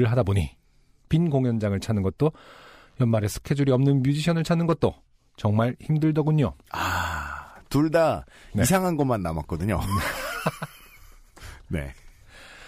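Nothing in the speech calls for comment, with no dropouts, clicks, glitches or other technical faults turning up anywhere along the way.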